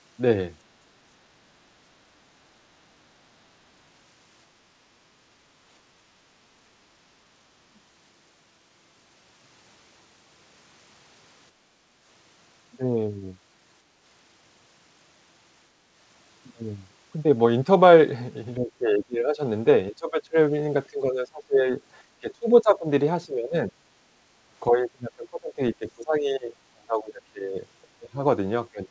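At 7.56 s the echo canceller likely misread both ends talking at once as loudspeaker echo and clamped the microphone path. This speech suppressed in double talk lasts about 0.2 s, and the voice sinks by roughly 25 dB before recovering. The same double-talk suppression recurs from 18.56 to 20.37 s, from 20.9 to 23.79 s, and from 24.68 s to the end. Each time the voice dips by around 20 to 25 dB.

From 11.52 to 11.96 s the canceller gated the microphone hard while the far end played. This is background gated by the echo canceller: the room sound falls by about 7 dB for roughly 0.4 s and then comes back.

Throughout the clip, nothing is heard above 8 kHz, which fits a G.722 call path at 64 kbps.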